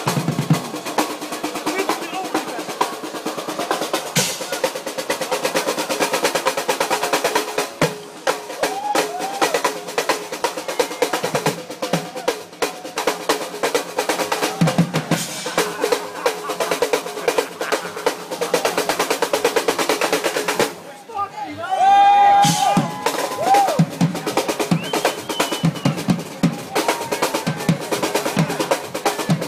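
No technical faults are audible.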